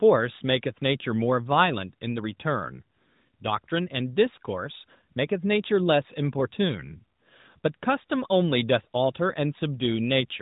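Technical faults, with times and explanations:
No technical faults detected.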